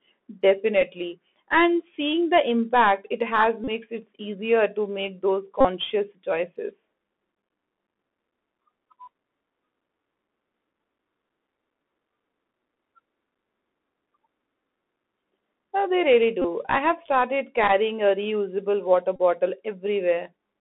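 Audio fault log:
throughout: Bluetooth CVSD headset codec. The sound fits a 64 kbps one-bit delta stream: the band runs only from 250 Hz to 3.5 kHz, with plainly audible granular hiss and scratchy sibilants where loud, bright sounds outrun the adapting step size. On a spectrogram there is a hard ceiling near 3.5 kHz, fuzzy noise fills the gaps, and energy below 250 Hz is missing.
3.64–3.68, 5.61–5.66, 16.42–16.45, 17.68–17.70 and 19.16–19.19: Bluetooth headset packet repeated. Brief buzzes last about 15 to 41 ms, for example between "the impact it has" and "it easier to make", between "they really" and "I have started", and just after "a reusable water". Their lengths fit runs of roughly four to eleven lost packets. Each repeated 3.75 ms block gives a buzz near 267 Hz. On a spectrogram this shows as short harmonic stripes spaced about 267 Hz apart, and on the waveform as an identical repeating pattern.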